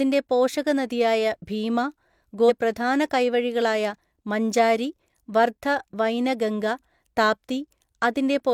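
At 2.45 s the speech jumps ahead with a brief blip, a stream segment skipped, likely from one failed chunk; unlike a dropout, there's no silence, just missing programme.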